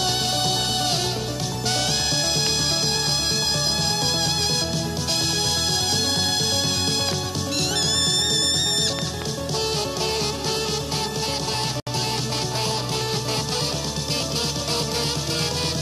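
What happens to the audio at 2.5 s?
A loud pop sits at 2.47 to 2.49 s, a single sharp transient lasting about 20 ms and peaking roughly 15 dB above the surrounding signal. It most likely comes from a sudden voltage step or pulse entering the chain, for example from a plug, switch, static discharge or a driver glitch. The circuitry after it shapes the pulse into a brief thump, and the sound continues underneath without interruption.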